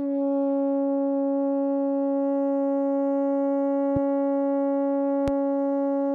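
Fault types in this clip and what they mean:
Loud pop: A sudden voltage pulse, likely from a switch or static discharge, enters the signal. It puts a single sharp pop over the music at 3.96 to 3.99 s, about 5 dB above it, and a louder one at 5.28 to 5.31 s, about 10 dB above.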